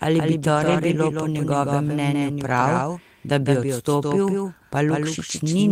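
It's a speech clip, and the whole way through there's a doubled audio track: a second full-band copy trailing about 150 ms behind, about 5 dB quieter, with no decay or room colour to it, so it reads as a flat slapback rather than an echo off walls. The likely cause is the same signal being picked up twice, once by a slower path, or an edit holding two copies out of step. Separately, from 0.55 to 0.77 s, right after "ali bi" and just before "bilo po njegovem mnenju", there's a lost packet rebuilt from error correction. It's really several separate ones, which fits six packets dropping and being refilled from the low-bitrate copies Opus carries in the next packet. There's no gap, but that stretch turns grainier and noisier.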